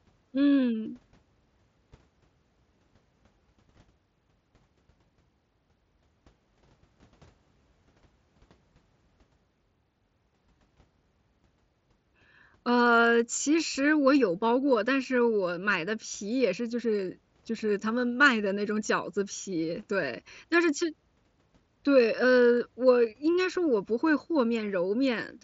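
The speech comes through a Bluetooth mSBC headset link working as expected, with the wideband audio reaching up to about 7.7 kHz and nothing above that, and no faults are present.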